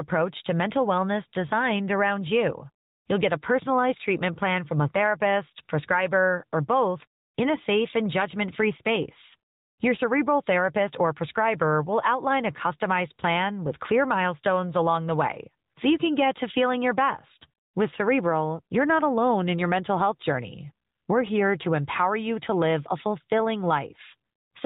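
Throughout, the speech carries AMR narrowband mobile codec damage. Nothing passes above 4 kHz. The speech sounds plainly buzzy and synthetic, from the codec running at 10.2 kbps.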